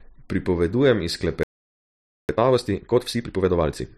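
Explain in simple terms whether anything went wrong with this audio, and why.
A playback stall from 1.43 to 2.29 s cuts the speech off for about 0.86 s, likely because the player ran out of audio data or was briefly blocked. Time-compressed catch-up follows from 2.29 to 3.89 s: the player trims and blends tiny pieces to recover lost time, so the speech runs 1.5 times faster at normal pitch.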